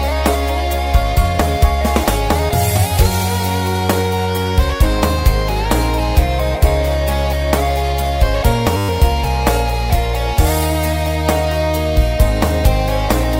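At 8.77 s the audio locks into a system hang loop that lasts until 8.89 s. The machine or its driver stalled while the sound hardware kept replaying the same stretch of its ring buffer. A 10 ms slice repeats exactly, twelve times over. That gives a 100 Hz cycle. It comes across as a steady buzz rather than a stutter. Almost no audio goes missing. The sound resumes where it stopped.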